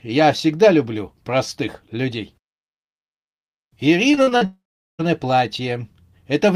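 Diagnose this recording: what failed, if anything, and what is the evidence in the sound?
Network stage: repeated packet loss (robotic sound) from 4.11 to 4.43 s. Five gaps, the longest 41 ms, were each patched by extending the preceding speech. That concealment fills roughly 43% of the span, so the voice turns choppy, with 140 ms missing.

Network again: a long network dropout is the likely cause from 4.45 to 5.01 s. The speech freezes into a stretched, fading continuation of the last sound, then about 400 ms of silence follows. Speech resumes afterward, and more than half a second is lost.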